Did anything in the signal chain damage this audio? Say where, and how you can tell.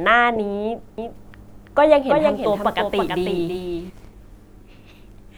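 Yes. From 0.98 s to 3.90 s the speech carries a doubled audio track: a clean, full-band copy trailing by roughly 300 ms, about 5 dB down, with no decay, cutting in and out abruptly. This likely comes from the capture stage feeding the signal in twice.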